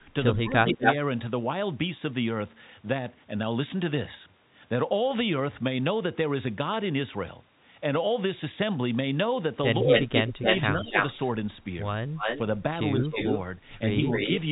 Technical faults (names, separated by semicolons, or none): speech suppressed in double talk; echo leak